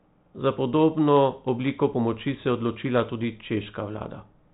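No technical faults are audible.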